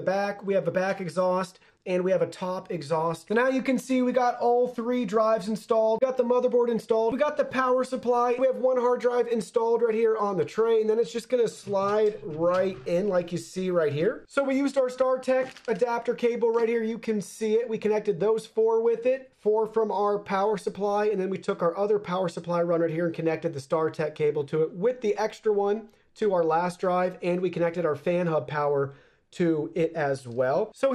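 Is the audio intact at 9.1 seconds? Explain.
No, not really. At 9.1 seconds you're hearing the same thing that runs through the whole clip: a dull, gurgly, grainy quality that sounds like MP2 compression, likely at around 80 kbps. MPEG Layer II splits the sound into 32 sub-bands, and at a rate that low there aren't enough bits, so upper bands drop out or flicker and the rest get quantised coarsely. That's what takes off the top and leaves the granular edge.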